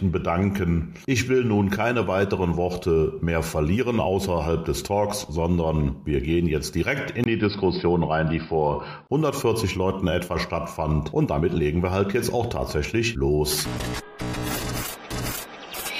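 The recording input was likely switched to a poorer device between 7.24 and 9.09 s, starting with a 20 ms gap of silence. The band narrows to nothing above 5.2 kHz, so the sound turns dull and boxy, with a faint new noise floor and no clear change in loudness.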